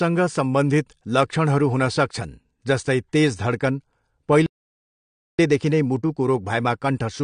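Speech, passed through an encoder that was likely AAC compression at a low rate, plainly damaged from start to finish. The coder spends too few bits on each block of frequency lines, so it discards everything above about 9.9 kHz and quantises the rest coarsely, which fits a bitrate around 32 kbps. The voice sounds dull and smeared, sibilants turn fizzy, and sustained sounds take on a warble. At 4.46 s the player likely runs out of data or is held up, a playback stall, and the output goes silent for about 0.93 s until 5.39 s, after which the sound resumes. Having fallen behind, the player then works through its backlog with time-compressed catch-up from 5.39 s to the end at 7.23 s, cutting small slices out of the signal and cross-fading the joins so the backlog drains at 1.1 times normal speed. The pitch stays where it was, but this last stretch sounds hurried.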